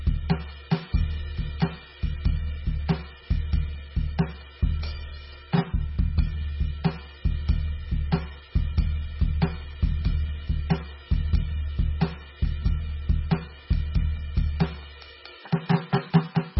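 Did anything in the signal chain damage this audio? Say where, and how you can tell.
Yes. Throughout the music, the treble stops dead at 5.6 kHz and the sound is heavily watery and swirling, likely MP3 compression at the codec stage, fitting a very low bitrate near 16 kbps. A spectrogram shows a flat ceiling and flickering, patchy holes below it.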